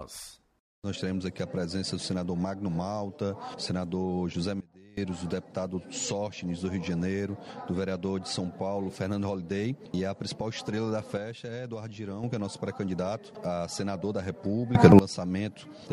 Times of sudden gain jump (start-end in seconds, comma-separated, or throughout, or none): 4.60-4.97, 11.17-12.23, 14.75-14.99